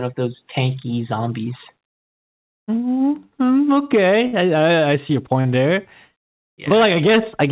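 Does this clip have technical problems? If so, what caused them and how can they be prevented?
Yes. A burst of packet loss at 4.27 to 4.34 s removes about 60 ms. The receiver stretches the last sound into a held, fading buzz or hiss before the audio resumes further on. This is longer than a brief smear. A larger jitter buffer, forward error correction or redundant packets, and a less congested network path would prevent this.

Short concealed packet loss occurs at 5.41 to 5.46 s, just after "I see your", and again at 6.69 to 6.71 s, losing about 40 ms and 20 ms. Each hole is filled from the preceding sound and blended back, so it is heard only as a quick smear or wobble, not a held tone. Reducing packet loss and jitter on the link, or adding forward error correction, would prevent these.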